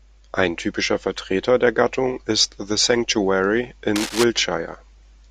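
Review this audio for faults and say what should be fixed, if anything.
From the start to 2.41 s, the speech has channel delay (comb filtering). One channel runs late by a tiny amount, around a single sample or a few hundredths of a millisecond. When the two channels fold to mono, shared content cancels at evenly spaced frequencies. With a delay this short, the first notch falls near 20 kHz. The effect is a dulling at the very top of the band. To prevent it, align the channels sample-accurately before any mono summing.

From 3.96 s to 4.24 s, a burst of cable scratch noise sits over the speech. It is a dense, ragged rustle, only a little quieter than the speech itself. It is most likely a worn cable, connector or control being moved, making the contact resistance jump around. The disturbance is brief. To prevent it, replace or clean the suspect connector and secure cables so they cannot shift during recording.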